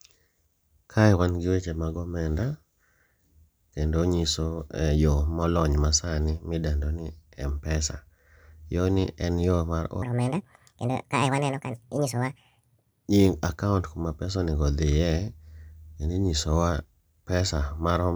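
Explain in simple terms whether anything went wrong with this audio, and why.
A section at the wrong speed runs from 10.02 to 13.06 s. There the speech plays 1.57 times too fast, so it sounds rushed and roughly seven semitones higher. Speed and pitch shift together, likely because that stretch was played against the wrong clock.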